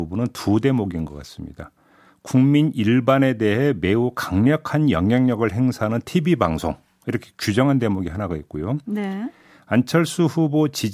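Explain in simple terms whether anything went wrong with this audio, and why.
Nothing went wrong with this recording of speech. Listening all the way through, there is no moment where a technical problem interrupts or spoils what you hear.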